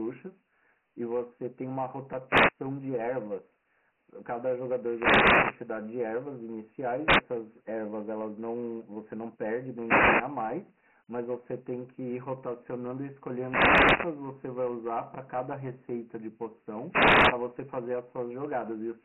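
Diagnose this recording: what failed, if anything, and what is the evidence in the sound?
The codec stage shows Dialogic VOX ADPCM throughout. The speech sits in a band of roughly 150 Hz to 3.5 kHz, with nothing above 3.8 kHz, and a gritty hiss rides on each syllable. The 24 kbps rate fits 4-bit samples at 6,000 per second. Unlike a clean low-pass, this damage is heavy and it follows the speech.

The analogue radio link before the converter shows wireless microphone noise hits at 2.27–2.53, 4.72–5.77, 7.02–7.25, 9.73–10.38, 13.27–14.30 and 16.87–17.39 s. Each is a swish of static as the FM signal fades. A digital dropout would go silent, but these bursts fill the gap with noise.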